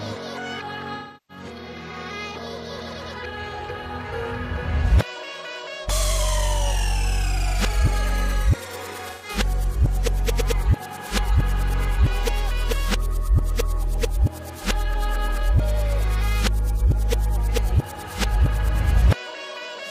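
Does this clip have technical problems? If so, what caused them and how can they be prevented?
Yes. AAC frame loss with concealment occurs at 0.95–1.44 s and 9.08–9.29 s, roughly 340 ms and 130 ms of missing data; the decoder rebuilds the gaps from the last good spectrum, giving smeared, noisy patches. Forward error correction or retransmission on the transport prevents this.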